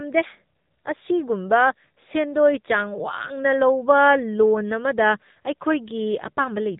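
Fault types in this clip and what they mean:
AMR narrowband mobile codec: The speech has passed through the narrowband codec used on 2G and 3G phone calls. It runs at 8 kHz sampling, so the band stops hard. Nothing is heard above 3.8 kHz. The codec rebuilds each 20 ms frame from a vocal-tract model fed by a few pulses. Here the damage is plainly audible. The voice sounds buzzy and synthetic throughout, which fits one of the lower modes near 8 kbps.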